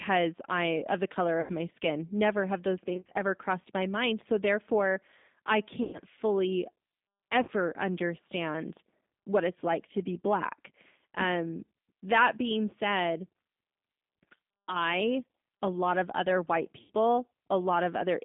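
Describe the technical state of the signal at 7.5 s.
At 7.5 s the sound sits inside a burst of VoIP packet loss concealed by the speech codec, running from 7.43 to 7.51 s. About 50 ms of audio, which fits five 10 ms codec frames, never arrived. The decoder extended its last pitch and filter at falling gain, so the voice turns into a brief fading buzzy tone or coloured noise. On a spectrogram this appears as flat, smeared harmonic stripes. The waveform shows a regular, decaying periodic stretch.

Underneath, the whole signal carries G.729 codec damage at 8 kbit/s, plainly audible as a rough, slightly synthetic tone. The line band runs from 200 Hz to 3.7 kHz, so a spectrogram shows a hard ceiling with nothing above it and a thin, low-pass-shaped waveform.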